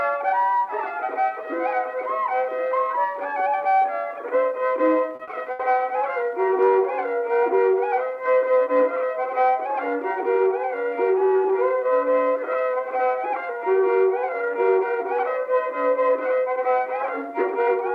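At 5.15 s and again at 5.23 s, two short concealed packet losses each replace 40 ms with an extrapolated continuation, heard as brief smears, visible as smoothed, repeated spectral slices. From 5.51 to 5.62 s, a burst of packet loss fills 80 ms with a decaying held tone or hiss; the waveform tapers, then resumes further along.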